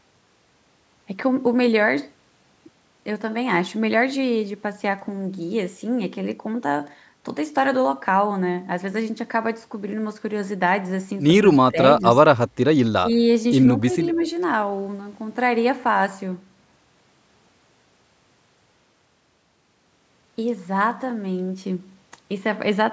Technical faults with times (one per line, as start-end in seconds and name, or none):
11.58-12.04 speech suppressed in double talk
12.46-12.58 background gated by the echo canceller
12.93-13.23 speech suppressed in double talk
13.80-14.22 speech suppressed in double talk
14.12-14.29 echo leak